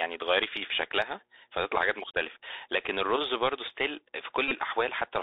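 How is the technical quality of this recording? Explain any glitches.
The technical quality is poor: the speech comes through a narrowband Bluetooth headset link with plainly audible codec damage, a mains hum runs underneath it, and one short glitch near the end comes from lost packets.

Mains hum runs through the whole clip. A ground loop or a nearby transformer is leaking the power line into the signal, giving a steady 60 Hz tone with some low harmonics. It sits well beneath the speech, roughly 35 dB down.

The Bluetooth CVSD headset codec also affects the entire recording. This codec tracks the waveform with one up-or-down decision per sample, adjusting its step size as it goes, and the line passes only about 300 Hz to 3.7 kHz. The result sounds thin and telephone-like, which fits a 64 kbps link. Loud, bright passages outrun the step size and distort, s sounds turn scratchy, and a grainy hiss lies under the speech.

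A Bluetooth headset packet repeat occurs from 4.48 to 4.52 s. Voice packets between headset and phone were lost for about 30 ms, which fits a run of around eight packets. During the gap the chip decoded the last good packet's bits again and again. Repeating every 3.75 ms, that creates a brief buzz near 267 Hz in place of the speech until good packets return.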